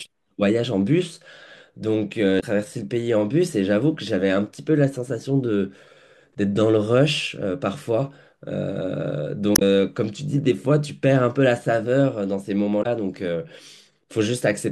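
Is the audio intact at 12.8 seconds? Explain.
No, there's damaged data in a compressed stream from about 12.79 to 12.86 s. The decoder hits corrupted bytes, misreads those frames and loses sync until it finds the next good frame header, so the speech breaks into a short chirp or blip there.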